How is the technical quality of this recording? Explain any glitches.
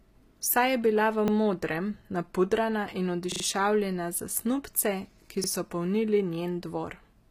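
The recording has two problems: coarse treble from low-bitrate compression throughout, and three short stutters.

The compression is likely HE-AAC, whose spectral band replication rebuilds the treble from copied lower bands shaped by a rough envelope. The damage is plainly audible: s sounds come out gritty and metallic, harmonics above the crossover don't line up with the speech below, and nothing reaches past 15.5 kHz. That fits HE-AAC v2 at a low bitrate near 24 kbps.

The repeated buffer faults come from audio not arriving in time, so the device replayed its last chunk, which sounds like a 40 ms buffer. At 1.28 to 1.32 s, between "je bila v" and "modrem napudrana in", one fragment plays twice with a hard join. At 3.32 to 3.44 s, after "v modrem napudrana in", it plays four times, a short stutter. At 5.44 to 5.48 s, between "za snubce" and "so polnili", it doubles once more. No audio seems to be skipped.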